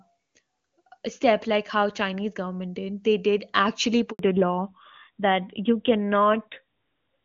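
At 4.11 s, just after "did actually", a handover gap occurs: the call switches networks and no speech frames arrive during the change. The sound drops away and stays silent for about 80 ms, until 4.19 s, losing whatever fell in that stretch.

From 4.19 s to the end, the call suffers a fallback to narrowband. The new link abandons the AMR wideband (HD Voice) codec, which was clean before the switch, for a narrowband AMR codec. Nothing above 4 kHz survives, so the voice turns duller and rougher.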